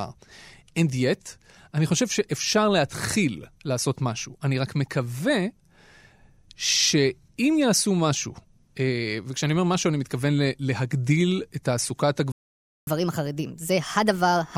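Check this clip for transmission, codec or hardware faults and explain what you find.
Two playback faults appear near the end of the speech.

A playback stall runs from 12.32 to 12.87 s. The sound cuts out for about 0.55 s, likely because the player ran short of data or its thread was blocked.

Catch-up at higher speed follows from 12.87 to 14.56 s. The player resamples its backlog at 1.25 times normal speed. The speech sounds hurried and roughly four semitones higher.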